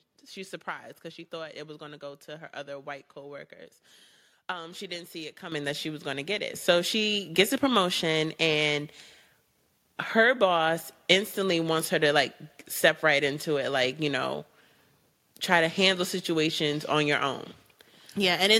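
The microphone volume stepped up twice as the call software judged the input too quiet and raised the device's gain in single jumps. At 5.52 s, between "she didn't see it" and "that she was going", the level rises by about 9 dB. At 6.54 s, just after "going to get it", it climbs again by about 6 dB. Each time the voice and the background noise get louder together, abruptly.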